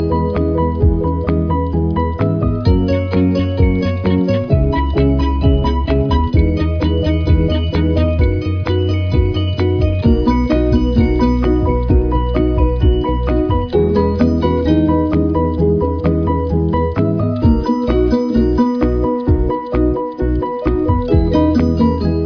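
No technical faults are audible.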